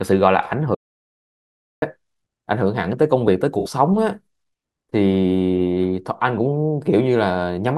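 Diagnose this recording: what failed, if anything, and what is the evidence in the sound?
An audio dropout to silence runs from 0.75 to 1.82 s: the speech cuts off into silence with no room tone for about 1.1 s, most likely because the capture input was lost.

AAC frame loss with concealment appears at 3.59 to 3.68 s in the codec stage: a 64 ms smeared, noisy patch where the decoder patched over a few missing frames.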